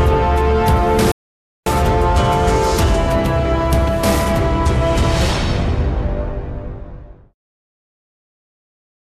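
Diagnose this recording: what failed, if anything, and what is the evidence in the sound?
The failure sits at the playback stage: a rebuffering stall between 1.12 and 1.66 s. The sound drops to silence for about 0.55 s and then picks up exactly where it left off, with nothing skipped or repeated. The player drained its buffer of downloaded audio and waited for more to arrive, inserting dead time rather than losing content. A waveform shows a flat gap, and a spectrogram shows a blank vertical band with clean edges on both sides.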